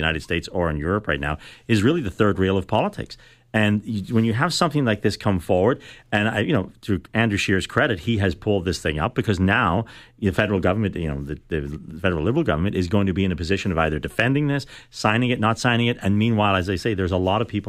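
From 0.32 s to 17.34 s the speech carries clock slip clicks: faint, evenly spaced ticks roughly every 0.4 s, about fifty in all, most audible on louder voiced passages and gone in pauses. The likely cause is two unsynchronised clocks differing by around 70 ppm, so a single sample is dropped or repeated each time the drift reaches one sample. A spectrogram shows thin vertical broadband lines at a regular spacing, and the waveform shows tiny step discontinuities.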